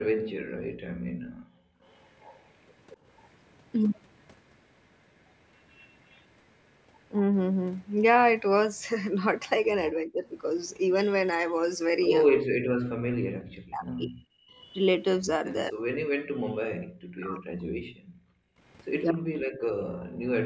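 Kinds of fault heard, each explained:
Background gated by the echo canceller: the canceller pulls the microphone down hard while the far end plays, so room sound drops by about 40 dB at 0.22–1.82 s and 18.01–18.59 s. The waveform shows near-flat gaps, and the spectrogram shows blank vertical bands.
Echo leak: a faint copy of the sound returns 230 ms late, about 25 to 30 dB below the main signal, at 1.83–3.29 s, 5.56–6.25 s and 18.84–19.11 s, likely from residual echo passing the canceller. The spectrogram shows weak, delayed, smeared duplicate traces.
Speech suppressed in double talk: with both sides active, the talker's speech is pushed down, likely because the canceller mistakes it for echo. It dips briefly at 9.96–10.24 s, then in deeper chops of up to 40 dB across 12.3–20.15 s, showing as notched, jagged waveform envelopes.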